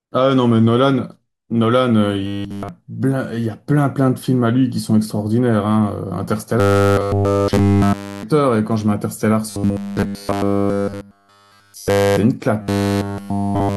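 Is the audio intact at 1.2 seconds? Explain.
Yes, the speech at 1.2 seconds is intact, with no dropout, click, distortion or other fault at that moment.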